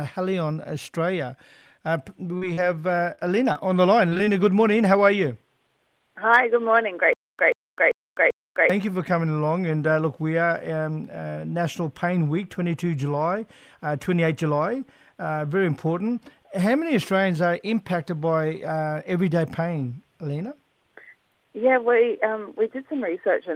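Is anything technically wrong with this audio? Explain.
Yes, there are two faults. Short concealed packet loss hits at 2.37, 2.53, 3.15, 3.20, 3.53, 4.09, 4.17 and 4.25 s. Late audio was patched by extending earlier sound, leaving brief smears or wobbles.

From 7.13 to 8.70 s there is a stutter with silent gaps. A 134 ms burst repeats four times, with 257 ms of silence between. It is likely a stalled stream replaying its last fragment.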